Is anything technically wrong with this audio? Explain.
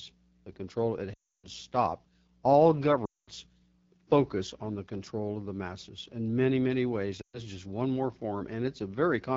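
Yes, two problems. The whole clip has the rough, raspy edge of the AMR wideband (HD Voice) codec at one of its lowest rates, consistent with the 8.85 kbit/s mode, where its voice model runs short on detail. There are also lost AMR speech frames at 1.14–1.46 s, 3.05–3.29 s and 7.21–7.40 s. In each gap the decoder repeats its last good settings at falling gain, so the speech smears and fades out before recovering roughly.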